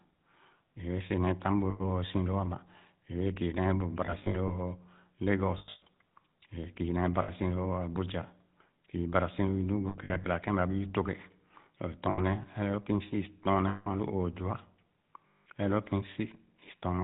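Throughout, the GSM full-rate codec at 13 kbps cuts everything above 4 kHz and gives the speech a plainly audible buzzy, gravelly roughness. Lost GSM frames occur at 1.7 s after "neh tam bu", 4.06 s after "kii nee bu", and at 5.58, 7.22, 9.88, 12.1, 13.68 and 15.28 s. Each gap is filled by repeating the last good frame, which produces a brief rough, metallic ring.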